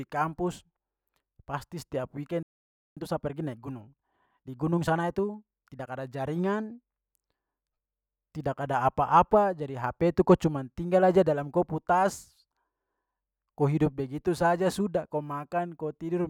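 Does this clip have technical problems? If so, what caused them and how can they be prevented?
Yes. The player most likely ran short of buffered data or had its audio thread blocked, so it produced nothing for a while. The result is a playback stall: right after "pasti setiap" the speech cuts out at 2.43 s and stays silent until 2.97 s, a gap of about 0.54 s, before resuming. A deeper playback buffer and keeping the audio thread free of blocking work would prevent it.

To recover the time lost in that gap, the player then trimmed its backlog by removing short slices of audio and cross-fading across the joins. This time-compressed catch-up runs from 2.97 s to 5.97 s, ending just before "ada jaringan". Over those three seconds the speech plays about 1.15 times faster at its normal pitch, sounding rushed. Avoiding the stall removes the need for catch-up, and a gentler speed-up would make it less noticeable.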